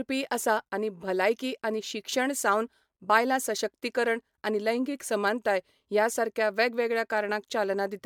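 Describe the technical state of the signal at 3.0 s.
At 3.0 s you're hearing generation loss, and it runs through the whole speech clip. The speech has a swirly, hollow, smeared quality, with consonant attacks blurred, and nothing above 19.9 kHz. That's likely from the audio being pushed through a lossy codec around four times, consistent with MP3 at about 128 kbit/s. Each re-encode quantises on a shifted frame grid, so the noise and spectral holes pile up.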